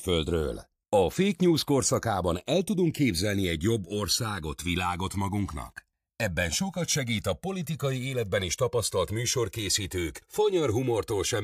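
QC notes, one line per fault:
Throughout, channels drifting apart: the left and right clocks disagree by roughly 300 ppm, so the delay grows to around 3 ms, sweeping comb notches through the speech as slow flanging in mono.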